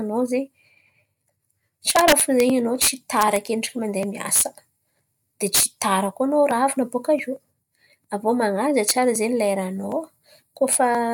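Integer overflow: loud speech peaks, pushed about 1 to 4 dB past the integer limit, wrapped to the opposite sign instead of being limited. This causes violent cracks at 1.90–2.40 s, 2.82–3.36 s, 4.36–4.41 s, 5.55–5.82 s just before "tara koa", 8.89 s and 10.73 s.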